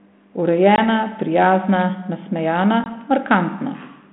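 At 0.76 to 0.79 s and again at 2.84 to 2.88 s there's packet loss on an ADPCM call: about one packet's worth, some 20 ms, drops to a hard-edged silent gap. The decoder's predictor then restarts out of step, so the sound comes back with slight roughness before settling.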